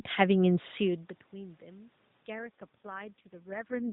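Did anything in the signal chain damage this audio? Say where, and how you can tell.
Yes. An AMR rate drop in the mobile codec, driven by the network, begins at 2.34 s and lasts to the end of the clip. From that point the voice turns rougher, buzzier and more synthetic, which fits the codec being switched from 12.2 kbps down to its lowest mode of 4.75 kbps. On a spectrogram the band still stops near 4 kHz with no gap, but the harmonics smear and the formants look coarse. The waveform shows no dropout. The level change near 3.5 s is the talker moving, not the codec.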